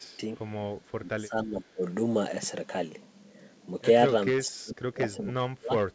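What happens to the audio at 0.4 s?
Right around 0.4 s, from 0.38 to 0.42 s, there's a tiny echo leak. It sounds like a faint scrap of the voice coming back about 453 ms late, sitting roughly 40 dB below the speech. The likely cause is a far end on speakerphone whose echo canceller didn't quite scrub what its mic picked up, so a brief sliver got sent back down the line.

Just before that, from the start to 0.32 s, the speech gets ducked. Over about 150 ms of that stretch the level dips, by roughly 25 dB at its deepest, so the start sounds patchy. That pattern points to speech suppressed in double talk, likely because both ends were talking at once and the canceller pulled down the near talker along with the loudspeaker echo.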